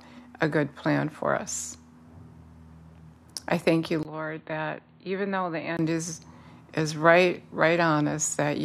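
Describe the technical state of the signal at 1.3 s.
At 1.3 s the speech signal is intact, with no dropout, distortion, glitch or other technical fault at that moment.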